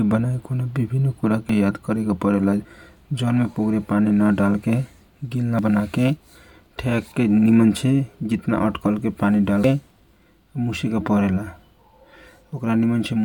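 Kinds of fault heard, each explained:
Dropped buffer (overrun): The speech jumps ahead at 1.49, 2.65, 5.59 and 9.64 s, losing roughly 40 to 150 ms each time. Likely unread samples were overwritten.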